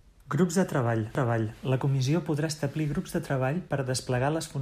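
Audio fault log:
1.15–1.58 s, repeated frames: a 0.43 s stretch of speech, which fits about five compressed frames, plays twice, giving a stutter and adding 0.43 s.
3.70 s, underrun with held sample: the output buffer ran dry for 5.8 ms, a 256-sample gap. The waveform holds flat, then resumes where it stopped, so there is only a soft tick.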